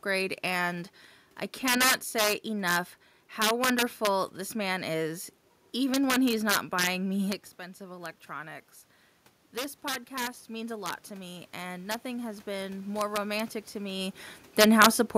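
A speech recording with two faults. Throughout, integer overflow: the signal is driven about 7 dB past the largest representable value, and instead of being limited those peaks wrap around to the opposite sign, so a small fraction of samples jump across the full range and the loudest moments break into harsh, violent cracks far sharper than ordinary clipping. From 9.54 to 14.18 s, automatic gain rising: after the input level falls by about 12 dB, as the talker moves away from the microphone, the gain control slowly lifts its gain by about 7 dB, so the voice and the room noise swell up together over several seconds.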